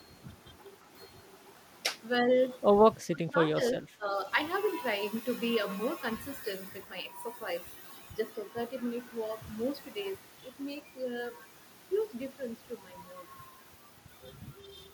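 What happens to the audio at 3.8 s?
From 3.76 to 4.13 s the speech sinks by as much as about 15 dB, thinning and breaking up in patches. It sounds like speech suppressed in double talk, likely an echo canceller that heard both ends talking at once, could not tell the near voice from loudspeaker echo, and turned everything down. On the waveform the envelope collapses for that span. On a spectrogram the upper harmonics fade and the energy shows gaps.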